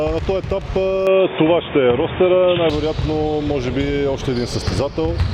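Input switched to a poorer device, 1.07 to 2.70 s: the sound abruptly turns dull and boxy, losing everything above 3.6 kHz, shifting level by a few decibels and gaining faint background noise, then clears. The likely cause is a seamless swap to a narrower-band microphone.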